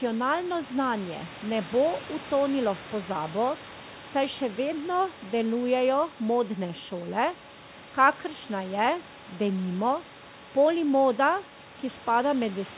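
The speech recording has no technical fault. The room noise sits about 19 dB below the speech, and nothing is heard above 4 kHz, which fits a normal telephone-band call path such as G.711 mu-law.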